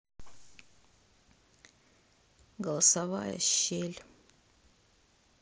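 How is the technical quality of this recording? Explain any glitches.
The recording has one brief glitch. At 2.87 s there is concealed Bluetooth headset packet loss. About 15 ms of headset audio went missing, and the phone patched the gap by repeating recent waveform. It sounds like a momentary buzz or smear. The mSBC headset codec carries wideband speech with light graininess.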